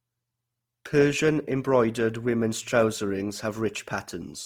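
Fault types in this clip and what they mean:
Opus compression: The speech sounds rough and grainy, with a fine noisy texture over the voiced parts in place of clean harmonic detail. The top end still reaches fullband, so it stays bright rather than muffled, and there is little of the swirly, hollow quality MP3 gives. The likely cause is Opus encoding in its music (CELT) mode, filling bands it cannot afford to code exactly with folded or noisy energy, which fits a rate near 24 kbps.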